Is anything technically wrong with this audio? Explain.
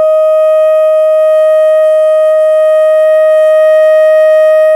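No, nothing technically wrong stood out on listening to this music clip.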